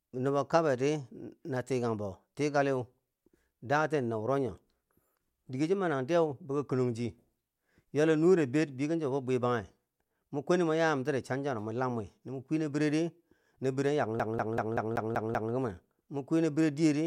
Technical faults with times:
14.19-15.53 CD stuck on one turn

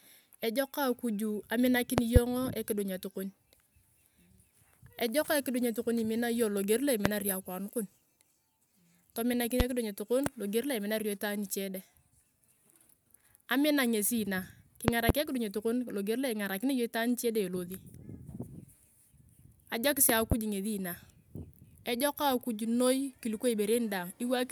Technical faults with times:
1.98-2.19 loud pop
7.05-7.09 loud pop
9.60-9.63 loud pop
14.88-15.12 loud pop
20.09-20.35 loud pop

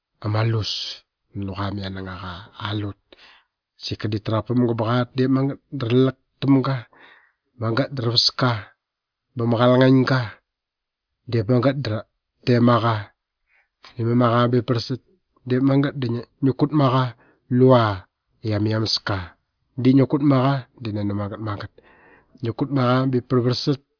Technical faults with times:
none

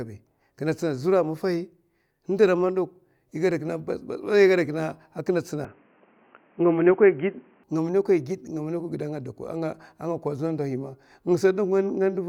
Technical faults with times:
5.65-7.64 input switched to a poorer device

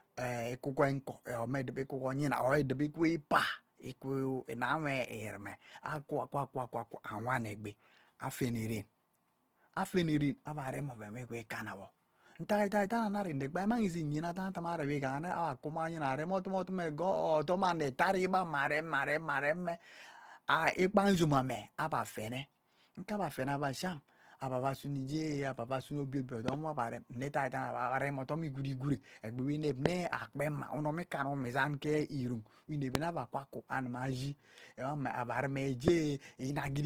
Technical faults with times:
0.00-36.86 Opus compression
26.48-26.55 loud pop
29.86-29.88 loud pop
32.95-32.97 loud pop
35.88-35.90 loud pop

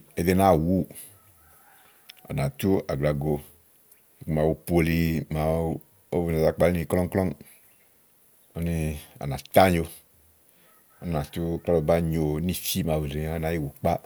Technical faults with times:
none

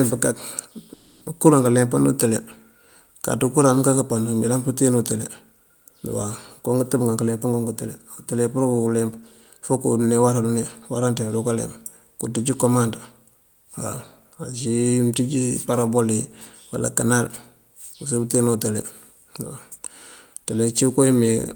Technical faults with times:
0.93-1.23 call audio freeze
6.95-9.72 jitter buffer speed-up

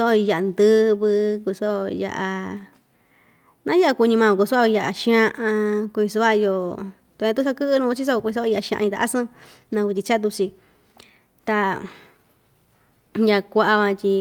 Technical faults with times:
none

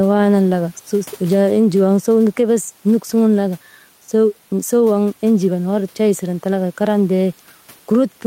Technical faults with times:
0.00-8.26 gain pumping

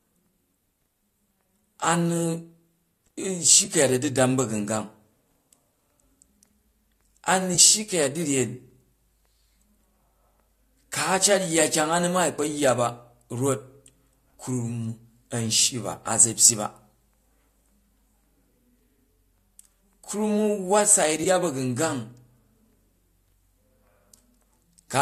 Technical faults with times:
3.65-3.69 AAC frame loss with concealment
7.54-7.60 AAC frame loss with concealment
21.23-21.27 AAC frame loss with concealment

